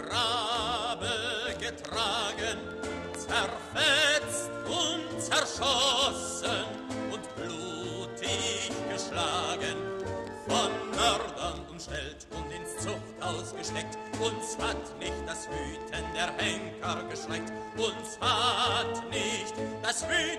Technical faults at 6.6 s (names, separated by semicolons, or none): none